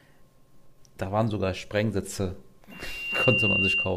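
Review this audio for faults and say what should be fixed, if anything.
A loudspeaker feedback squeal starts at 2.71 s and lasts to 3.97 s. A single tone near 2.8 kHz swells over about half a second. It ends a few dB louder than the speech. The microphone picks up its own loudspeaker, and at that frequency the loop gain exceeds one. To prevent it, move the microphone away from the loudspeaker, lower the gain, or notch out 2.8 kHz.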